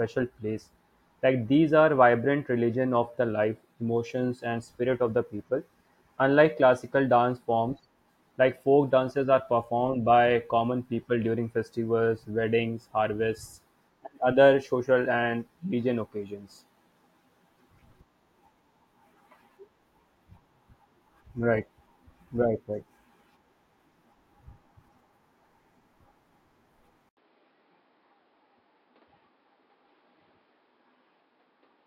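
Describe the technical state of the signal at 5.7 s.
At 5.7 s the signal is intact, with no dropout, distortion, glitch or other technical fault.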